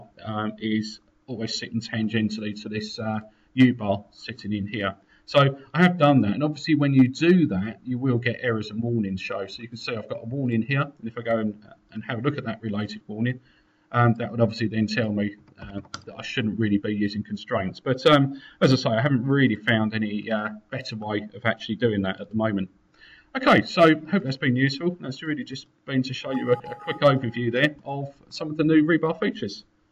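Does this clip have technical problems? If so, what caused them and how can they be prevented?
No technical faults are audible.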